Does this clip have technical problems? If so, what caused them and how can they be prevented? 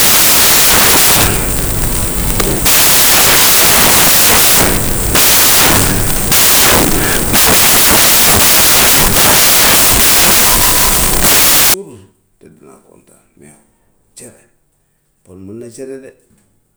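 Yes. From 0.0 to 11.74 s, loud, harsh broadband noise is heard. These are samples built from the wrong bytes. Each sample was assembled misaligned or byte-swapped, so its fast-changing low bits became the large part. Prevent it by matching byte order, offset and sample width to the declared format.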